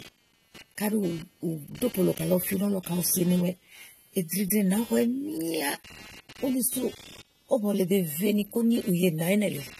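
From start to finish, computer activity noise sits under the speech: a buzzy, chirping pulse train at roughly 200 Hz, about 25 dB below the signal, from processor or peripheral load disturbing the audio ground. On a spectrogram it forms faint regular vertical striations unrelated to the speech energy.

Throughout, the speech also sounds dull and smeared, with a watery, fizzy texture on sibilants and sustained vowels, likely from AAC compression at a low bitrate around 32 kbps. A spectrogram shows a hard ceiling at 14 kHz.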